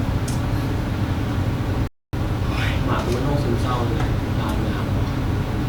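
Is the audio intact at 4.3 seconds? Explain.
Yes, the speech at 4.3 seconds plays through intact, with no dropout, click, distortion or other fault at that moment.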